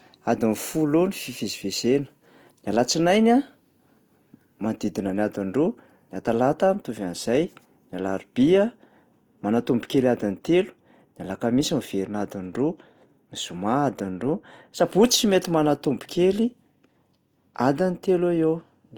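Throughout the speech, voiced sounds are rough and grainy, with a noisy sheen replacing clean tones, though the top end still reaches 20.1 kHz. The likely cause is Opus compression in music mode filling starved bands with noise, which fits about 24 kbps.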